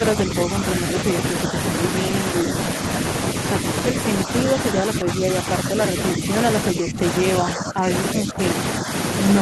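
The echo canceller likely could not tell this talker apart from the far end's echo while both sides spoke, and turned everything down together, causing speech suppressed in double talk. The voice dips in short patches at 0.0–0.84, 1.47–1.55, 2.44–2.79, 3.92–6.3, 6.73–7.04, 7.4–8.4 and 8.81–8.89 s. Most dips are shallow, around 5 dB, but the two near 7 s sink nearer 10 dB, so the talker briefly fades.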